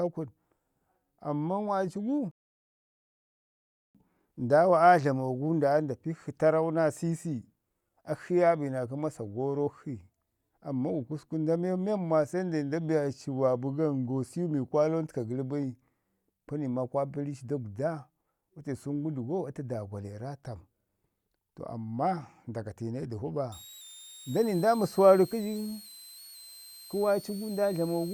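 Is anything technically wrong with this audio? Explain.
Yes. A rebuffering stall runs from 2.31 to 3.95 s: the player exhausted its downloaded audio and halted until more arrived. The speech drops to silence for about 1.63 s, then picks up exactly where it stopped, so nothing is lost but time is added.

A switching supply whistle appears from 23.52 s to the end. A switching power supply is running in an audible burst mode or beating against another supply. It produces a high whistle, around 4 kHz and roughly 20 dB below the speech, and its pitch wanders between 3.49 and 4.43 kHz as the load shifts.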